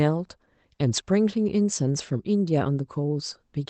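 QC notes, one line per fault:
No faults found; the speech carries the band-limited sound of a call path, tops out around 8 kHz, and is consistent with Opus at roughly 20 kbps.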